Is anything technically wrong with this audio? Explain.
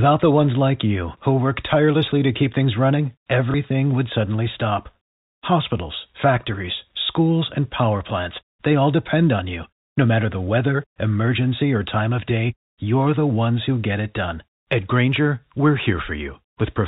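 Yes, there's one packet loss with last packet repeated, from 3.51 to 3.54 s, right between "to keep things running" and "would suddenly stop". About 30 ms went missing, which fits a single lost packet, and the receiver filled the gap by playing the previous chunk again. That repeat comes across as a small blip. The G.711 telephone band, capped at 4 kHz, carries through it.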